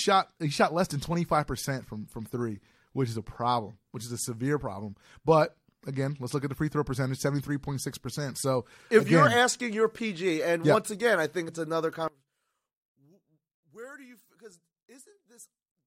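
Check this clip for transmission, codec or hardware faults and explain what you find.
Two faults turn up, one brief and one that runs to the end.

At 11.48 s, between "once again I think" and "it's another", compressed frames are skipped. About 20 ms of audio never gets decoded, so the speech jumps forward.

From 12.08 s to the end, right after "I think it's another", the level falls by about 25 dB and the centred speech nearly disappears, leaving a faint residue. That's likely one channel inverted: reversed polarity makes the shared content cancel when the channels are summed.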